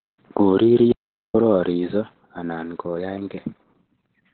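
Opus voice compression runs throughout, its SILK coder squeezing speech to narrowband with nothing above 4.3 kHz, which fits roughly 8 kbps; unlike plain low-pass filtering, it sounds hoarse and faintly robotic, not merely muffled.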